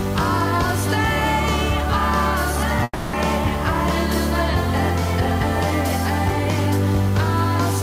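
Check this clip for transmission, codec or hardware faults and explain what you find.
One fault is present: a long network dropout from 2.83 to 3.16 s. The final sound before the gap is stretched into a fading buzzy hiss for about 0.3 s, then roughly 30 ms of silence follows, and the audio resumes with that stretch missing. The likely cause is lost packets, with the receiver concealing the gap by extending what it last had. On a waveform this appears as a tapering envelope that ends in a brief flat line. A spectrogram shows a smeared, repetitive band that fades into a blank strip before normal detail returns.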